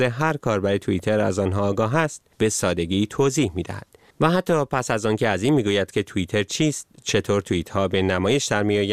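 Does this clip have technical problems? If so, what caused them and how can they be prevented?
No, this speech recording has no technical problems. With nothing at fault, there is no cause to trace and nothing to prevent.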